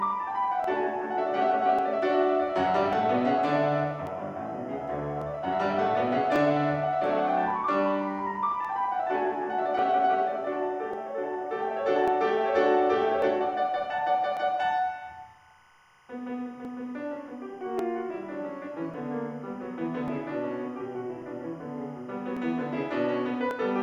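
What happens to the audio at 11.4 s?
Around 11.4 s you're in the middle of a run of clock drift buffer slips, regular clicks every 1.14 s from 0.64 to 23.51 s, likely two clocks drifting roughly a thousand ppm apart. Underneath sits timecode bleed: a 25-frame code warbling between about 1 and 2 kHz, roughly 35 dB below the signal.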